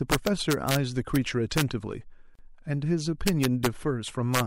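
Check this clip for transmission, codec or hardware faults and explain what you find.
Two faults are present in this speech: integer overflow on loud passages and a short gap where separately encoded pieces were joined.

Integer overflow occurs from 0.12 to 0.76 s, at 1.16 s, from 1.58 to 1.62 s, from 3.28 to 3.66 s and from 4.35 to 4.40 s. A gain or summing stage ran past the largest value its integer format can hold and, with no limiting, wrapped to the opposite extreme. Peaks pushed about 2 dB over the ceiling (about 0 dB in the single 1.16 s event) flip across the full range, producing violent cracks far harsher than ordinary clipping.

The gap at a join of encoded pieces falls at 2.35 to 2.39 s. The audio was encoded in sections and spliced without trimming, so one run's end padding and the next run's start-up delay both survived as silence. The result is a dropout of about 35 ms with smeared edges, after which the speech resumes exactly where it broke off.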